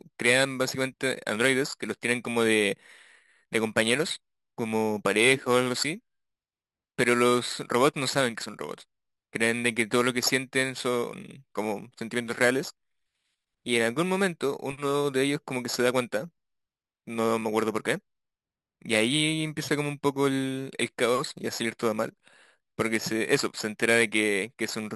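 Throughout, imaging from sample-and-hold upsampling adds a metallic fizz that tracks the speech. Repeated samples, pointing to 12 kHz raised to 48 kHz, leave mirror images from 6 to 12 kHz, about 14 dB down.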